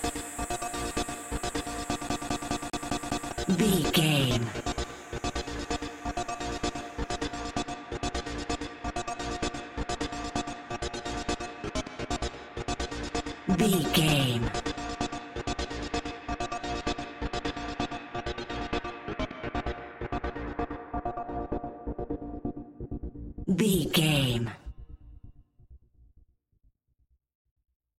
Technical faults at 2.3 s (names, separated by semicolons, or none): CD stuck on one turn